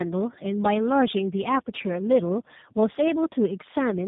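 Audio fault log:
throughout: tandem speech coding. The speech is rough, muffled and warbly, which points to three speech codecs in a row ending in a low-rate one such as G.729A, each re-coding the previous one's damage so the artefacts compound, with nothing above 3.8 kHz.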